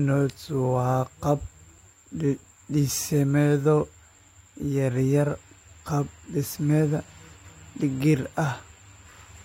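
No audible faults anywhere in the speech recording.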